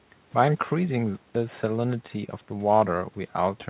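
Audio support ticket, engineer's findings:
Nothing to flag on this one: the speech comes over the call path as you'd expect for G.711 mu-law at 64 kbps, with the band topping out around 4 kHz, and no faults turned up.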